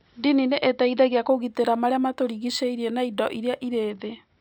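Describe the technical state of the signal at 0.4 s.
At 0.4 s the speech signal is intact, with no audible fault at that moment.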